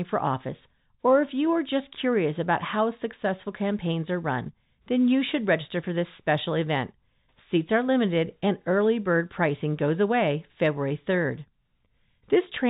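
No technical faults can be heard anywhere in this speech.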